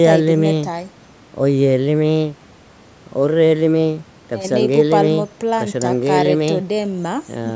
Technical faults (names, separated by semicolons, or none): none